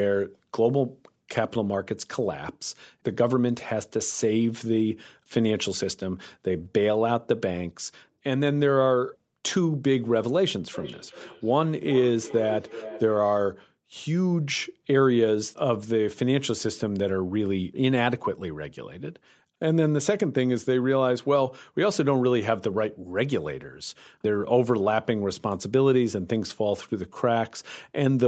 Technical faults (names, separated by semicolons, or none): feedback echo between two devices